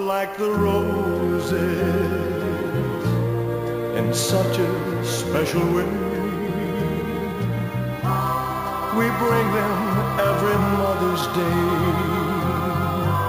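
Throughout the audio, the rate was raised from 16 kHz to 44.1 kHz by simply repeating samples with no smoothing filter, so imaging from sample-and-hold upsampling puts a mirrored copy of the spectrum between 8 and 16 kHz, about 21 dB below the signal, heard as a metallic fizz that rises and falls with the sound.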